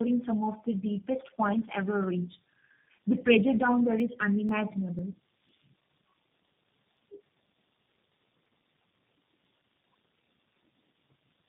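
Tandem speech coding runs through the whole clip: the speech passed three speech codecs in a row, finishing with G.729A, each recoding the previous one's damaged output. Nothing remains above 3.7 kHz, and the speech sounds muffled, rough and warbly.

Periodic USB or driver dropouts begin at 4.0 s, just after "pressure down there", and continue to 9.94 s. Every 0.496 s a few milliseconds of audio are skipped outright as a blocked bus or driver stalls, about fifteen evenly spaced losses that are heard as regular ticks wherever speech is sounding.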